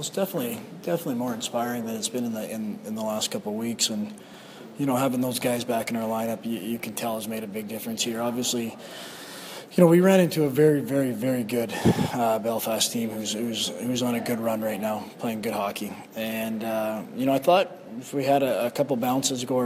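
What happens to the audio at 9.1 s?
Nothing goes wrong at 9.1 s; the audio runs through that moment intact, with no break, click or change in level.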